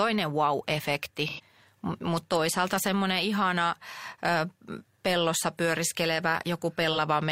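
Speech clip with AAC frame loss with concealment: dropped frames were filled from the last good spectrum, leaving brief smeared, phasey patches at 1.29–1.40 s (about 85 ms, roughly two frames) and 6.92–6.98 s (about 43 ms, one frame).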